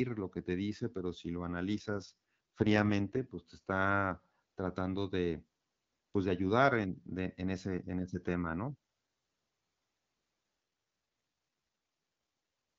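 From 1.78 to 3.22 s, between "dice pero si lo" and "pues te está tratando", and again from 10.59 to 12.69 s, an AMR rate drop cuts the wideband codec's bitrate, which fits a fall from 12.65 to 6.6 kbit/s. The band and continuity hold, but the speech turns rough and synthetic until the rate recovers.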